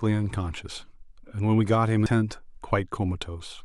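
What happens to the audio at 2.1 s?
A CD skip occurs at 2.06 s: the laser lost its track and landed on a different turn of the disc's spiral. Playback mutes for only a few milliseconds, heard as a brief tick, and the speech then resumes from another point, so its continuity breaks abruptly.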